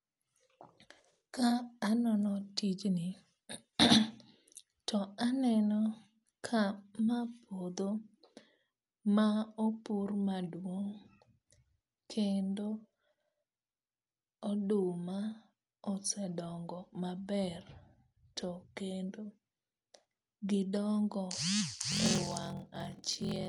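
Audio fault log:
throughout: Dolby Digital compression, likely, at a rate fitting 64 kbps; a narrowed band leaves the speech dull, with rough fluttering noise filling starved frequency lines.
21.9–23.48 s: block size mismatch (padded); short blocks zero-filled to fit 1024-sample reads give a 43.1 Hz buzz and slow the speech to 0.861 speed, timbre unchanged.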